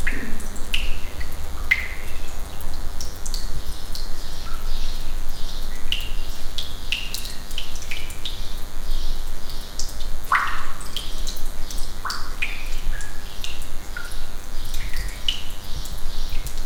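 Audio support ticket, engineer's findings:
DECT cordless phone buzz, whole clip. Thin steady buzz, roughly 25 dB below the main sound. Nearby DECT handset or base bursting every 10 ms, rectified in the audio circuit. Spectrogram: flat lines at 100 Hz plus evenly spaced harmonics throughout.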